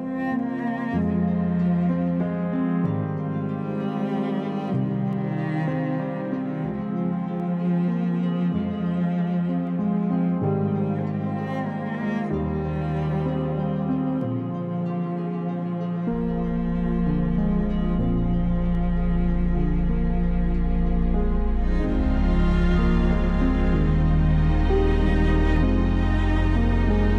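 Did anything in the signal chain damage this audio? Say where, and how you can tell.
Yes. Between 0.59 s and 25.57 s there is a regular series of about ten clicks, one every 2.27 s, heard only while sound is present. The fixed spacing suggests clock drift buffer slips at the driver or buffer stage, likely between two devices whose clocks disagree by roughly 70 ppm, so a few samples are dropped or repeated at each slip. Network packet loss or a failing cable would produce irregular, uneven gaps, not this clockwork rhythm.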